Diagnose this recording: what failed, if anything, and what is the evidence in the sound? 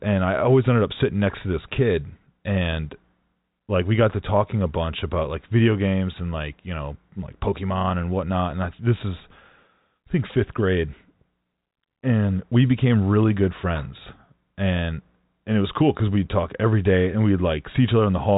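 No failure in this recording.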